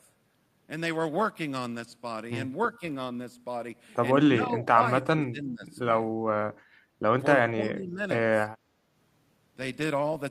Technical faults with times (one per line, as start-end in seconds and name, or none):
4.34-5.77 speech suppressed in double talk
7.38-8.01 speech suppressed in double talk